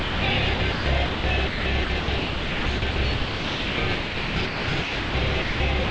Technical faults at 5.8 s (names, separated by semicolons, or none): sound chopped by the voice detector